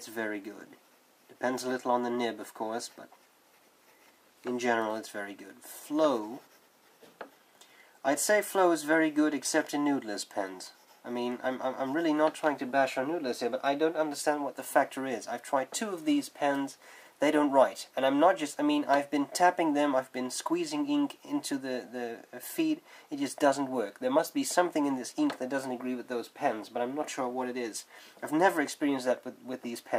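No technical faults can be heard anywhere in this audio.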